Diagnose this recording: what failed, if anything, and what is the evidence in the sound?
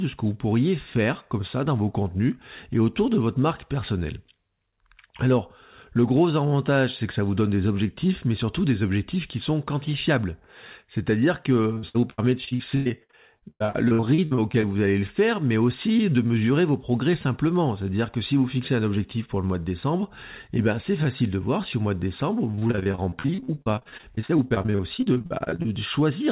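Network trouble: repeated packet loss gives choppy, robotic speech from 11.74 to 14.65 s, before "vous allez le faire", and 22.51 to 25.66 s, after "au mois de décembre", with about a third concealed.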